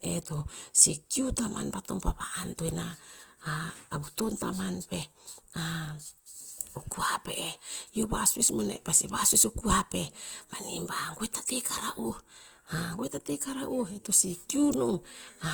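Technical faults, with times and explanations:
Throughout, Opus compression: speech turns grainy and rough rather than swirly, yet extends to 20.1 kHz, likely CELT-mode coding near 24 kbps noise-filling bands.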